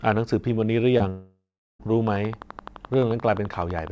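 At 0.98 to 1.02 s, a short concealed packet loss: about 20 ms of the call arrived too late for the decoder, which extended the preceding speech to fill the gap before blending back into real audio. It is heard as a brief smear in the speech.

From 1.10 to 1.81 s comes a long network dropout, likely a stall in packet delivery. Roughly 700 ms never played. The receiver stretched the last sound into a fading buzz, then about 360 ms of silence remained until speech returned with that stretch missing.

From 2.07 s to the end, a train of clicks, likely interference or a struggling interface, injects about 11.7 evenly spaced pulses per second. Each sits about 5 dB above the speech, producing steady ticking in gaps and over speech, above a G.722 call path with nothing above 8 kHz.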